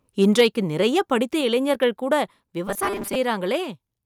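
From 0.22 to 0.47 s the loudest speech peaks are flattened at the converter ceiling, sounding like microphone overload, with the input likely driven about 5 dB past full scale. Only a small share of samples are affected, so the result is a brittle crackle riding on the strongest syllables rather than a continuous fuzz. That separates it from a distorting loudspeaker or a codec artefact: the harshness appears only where the level peaks and vanishes between them.

At 0.41 s, just before that overload ends, the whole signal, speech and background together, drops by about 3 dB in a single step. This is a microphone volume step-down, likely the call software reacting to the clipping by lowering the device's input volume. Unlike a gradual automatic-gain fade or a speaker moving away from the microphone, the change is instant and stays at the new level.

From 2.68 to 3.16 s the speech becomes a rigid, metallic buzz at 200 Hz. 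This is robotic sound from repeated short buffers, likely caused by audio arriving too seldom, so a 5 ms stretch is replayed to fill the gaps while roughly half of the real audio is skipped. Unlike a low voice or a pitch-shift effect, the buzz sits at one fixed rate, and the rough shape of the speech survives underneath it.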